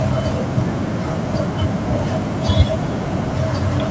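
From start to finish the speech carries an echo with no canceller: the far end plays the call through a loudspeaker, its microphone picks it up, and nothing subtracts it. A faint copy, about 28 dB down, trails each phrase by roughly a third of a second, thinner than the original, and band-limited like the call audio, which stops at 8 kHz. The clear gap before the repeat separates it from room reverberation, which smears continuously.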